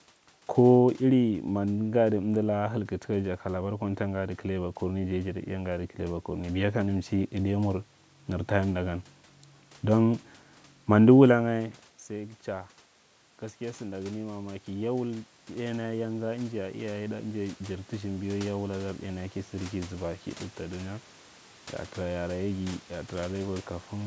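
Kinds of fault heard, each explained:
Automatic gain rising: from about 13.6 s to 20.0 s the sound swells slowly, voice and room background growing louder together by about 9 dB, with no sudden step. The input had dropped by about 14 dB, around the point near 11 s where the talker moved away from the microphone, so the automatic gain control judged the level too low and raised its gain gradually over those six seconds, lifting the background along with the voice.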